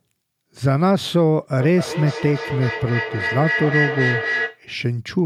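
From 1.59 to 4.64 s, feedback howl builds near 2 kHz, with repeats roughly every 300 ms. A microphone-to-loudspeaker loop gains level each pass, peaking about 5 dB below the speech.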